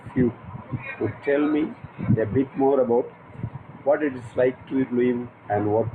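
No technical faults can be heard anywhere in this speech recording. Nothing in it calls for comment at any point.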